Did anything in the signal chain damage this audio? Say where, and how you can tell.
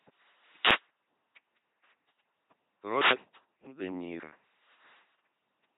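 Yes. LPC-10 vocoder damage runs through the whole clip at the codec stage. The speech is rebuilt at 2.4 kbit/s from a ten-pole vocal tract filter driven by buzz or noise, so it sounds heavily robotic and mechanical, with nothing above 3.8 kHz.

A wireless microphone noise hit occurs from 0.58 to 0.85 s, at the radio link ahead of the converter. A short burst of static swishes over the voice, which points to the FM signal fading as reflections cancel and receiver noise rising into the audio.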